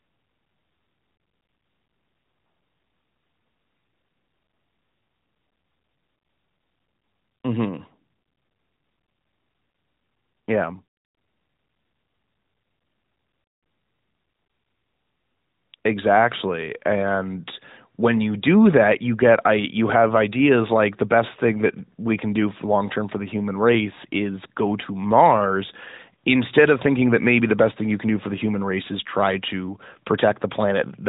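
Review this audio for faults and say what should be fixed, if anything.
Nothing needs fixing: the speech shows only the expected AMR narrowband mobile codec character, band-limited to about 3.8 kHz with light coding texture that fits the 12.2 kbps mode.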